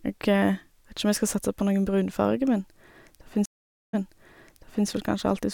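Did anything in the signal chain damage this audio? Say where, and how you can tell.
Yes. A stream reconnect at the network and playback stage hits this speech between 3.46 and 4.87 s. The audio drops out for about 0.48 s and then resumes roughly 0.94 s earlier, repeating material as a freshly started decoder picks up a resent burst.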